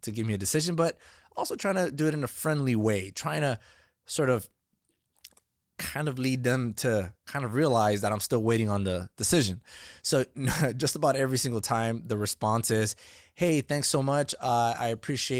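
Nothing here stands out as a technical fault; the speech just rolls along through its Opus voice coding at 24 kbps without anything going wrong along the way.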